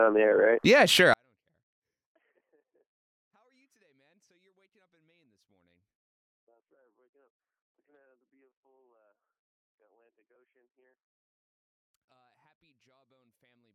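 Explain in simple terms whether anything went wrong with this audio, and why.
Something did go wrong. At 1.14 s the sound suddenly becomes almost silent, and it stays that way until the end. This is a 24-bit alignment error (too quiet). The audio was stored as 24-bit numbers sitting in the lower part of 32-bit slots. Something then read those slots as full 32-bit numbers. Every value came out far smaller than it should be. So the sound stays clean but is pushed down to a faint whisper.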